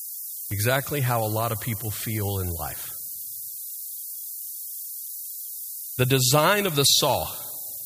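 Low bit depth with noise shaping runs through the whole of this speech clip. The audio appears to be quantised to about 6 bits, with the rounding error fed back and pushed upward in frequency, leaving a steady, thin hiss that climbs toward the top of the band and sits nearly as loud as the speech.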